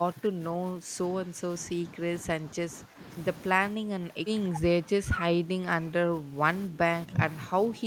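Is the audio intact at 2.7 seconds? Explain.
No. From 2.39 to 3.01 s the clip shows speech suppressed in double talk, likely because both sides spoke at once and the echo canceller could not tell this talker from the loudspeaker echo, so it attenuated everything it heard. The speech at 2.7 s sits inside that span: it dips by roughly 10 dB at its deepest, with about half a second of the span affected in all.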